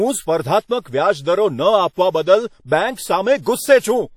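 Throughout the speech, a smeared, ringing quality and a hiss that swells and fades with the voice point to plainly audible WMA compression, likely from an encoder at around 48 kbps. A spectrogram shows a hard ceiling at 18 kHz and patchy, blurred energy.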